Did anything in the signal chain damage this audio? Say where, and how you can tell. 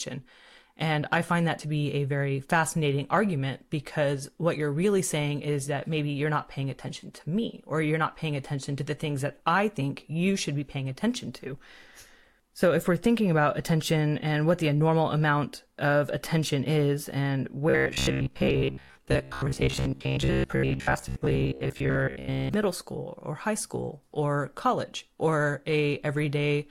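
Yes, at the driver or buffer stage. From 17.70 to 22.54 s, between "of attention is and" and "school or high school", the speech turns into robotic sound from repeated short buffers: a rigid 66.7 Hz buzz, likely from a 15 ms chunk looping while most real audio is dropped.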